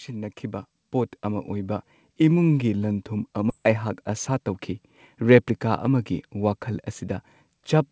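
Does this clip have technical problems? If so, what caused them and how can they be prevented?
Yes. From 0.07 to 2.49 s there is automatic gain rising. The gain control judged the input too quiet and raised it by about 7 dB, so the speech and background swell together. To prevent it, set a steady input level at the source so the gain control has nothing to correct.

At 3.5 s the audio does a skip ahead. Roughly 0.7 s of speech is dropped, and the two sides are joined with no gap. This points to the jitter buffer overflowing and discarding queued audio. To prevent it, stabilise the network path and give the jitter buffer more headroom.

From 4.09 to 4.49 s a jitter buffer speed-up runs the speech at 108% with unchanged pitch. The receiver trimmed short pitch-period pieces, a few tens of milliseconds in total, to shrink its delay. To prevent it, reduce packet bunching by improving network stability.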